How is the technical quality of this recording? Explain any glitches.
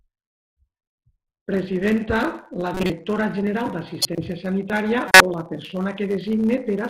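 Three short glitches interrupt the speech, at 2.74 to 2.90 s, 4.02 to 4.18 s and 5.07 to 5.21 s, the last just before "o la". Each puts energy at the wrong frequencies for a moment. The later two are the loudest and the first is about 10 dB quieter. They are corrupt frames that were decoded anyway: flipped bits in the compressed data gave the decoder wrong gains and codes across a handful of consecutive frames.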